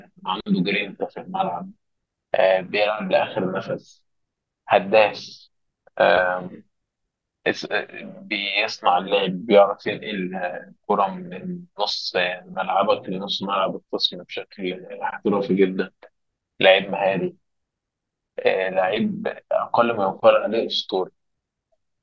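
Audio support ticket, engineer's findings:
Listened through the speech recording and nothing stood out as a fault.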